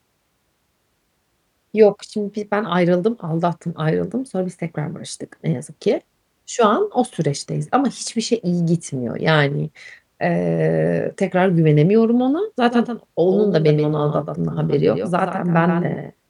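A speech recording with a doubled audio track: the same signal was likely picked up a second time through a slower route and mixed back in. From 12.69 s, right after "eee tekrar güvenemiyorum ona", a full-band copy trails the original by around 150 ms, roughly 10 dB quieter, through to the end. It cuts in abruptly and has no decay or room colour, so it reads as a flat, clean repeat.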